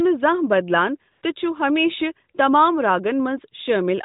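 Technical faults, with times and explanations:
1.12–1.22 s, AMR comfort noise: background gives way to a smooth, steady hiss for 100 ms, as the receiver, getting no speech frames, synthesised filler noise.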